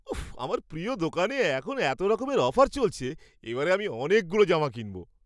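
Nothing stood out on listening to this speech recording.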